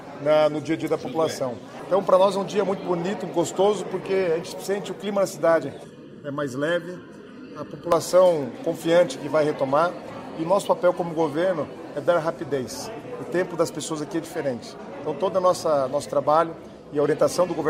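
From 5.84 to 7.92 s the sound turns hollow and phasey: channel delay comb filtering, where one channel lags the other by under a millisecond and the mono sum cancels evenly spaced frequencies, the first near 700 Hz. Unlike flanging, these notches stay fixed rather than sweeping.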